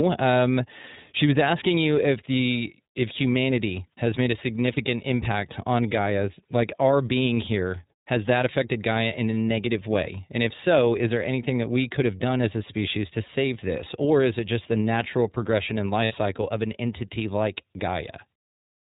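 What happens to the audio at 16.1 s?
At 16.05 s a short run of iLBC packets went missing, and the decoder had to conceal a gap lasting until about 16.12 s, roughly 60 ms of lost audio, which fits two 30 ms frames. With no data to decode, it replays the last pitch cycle it received, blended with noise, so the gap sounds like a briefly held, slightly buzzy vowel rather than silence. Because each iLBC frame is decoded independently, the speech snaps back almost immediately once packets arrive again.

Underneath that moment, the whole clip runs through the iLBC codec. It is a narrowband codec, so everything above 4 kHz is cut off. It codes each 30 ms frame's excitation on its own, and the level of damage fits its 13.33 kbps mode. The result is plainly audible across the clip: speech that stays intelligible but sounds dull, a little rough and synthetic, including around the concealed gap.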